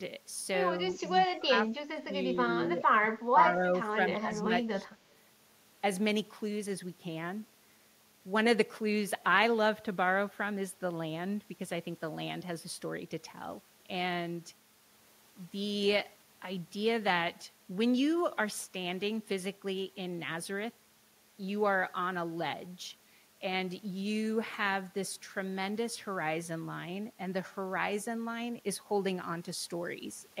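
From 0.82 to 4.88 s the speech repeatedly dips, by up to roughly 20 dB, for about a second and a half in total, likely speech suppressed in double talk. The waveform shows notched gaps in the envelope.

At 5.11 to 5.15 s a faint copy about 160 ms late, around 40 dB below the speech, is likely echo leak. It appears as a weak, delayed smear on the spectrogram.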